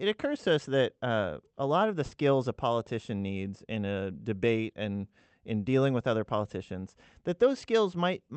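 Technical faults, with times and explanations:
2.05–2.14 s, burst of packet loss: for about 60 ms the last speech sound is stretched into a fading buzz or hiss, then the audio jumps ahead, skipping about 60 ms. Unlike a plain dropout to silence, the gap is filled rather than silent.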